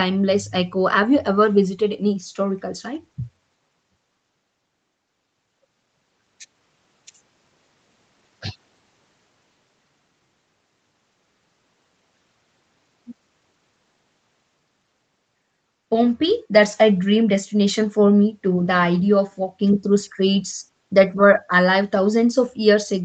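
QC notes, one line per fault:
Nothing to flag here: the speech comes across as a normal call would, with the microphone processing and the call codec keeping everything below about 8 kHz, just as expected for that path.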